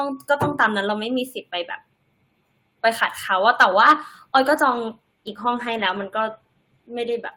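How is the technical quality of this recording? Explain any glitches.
The recording has one clear fault, a call bitrate drop starting at 3.89 s and lasting to the end of the clip. The call's bandwidth estimate fell, and the encoder was pushed from 32 kbps down to 18 kbps, staying at that lowest rate for about 3.05 s. With far fewer bits, the codec quantises the speech more coarsely and trims the upper frequencies. From that point the speech sounds duller and rough or watery, without recovering.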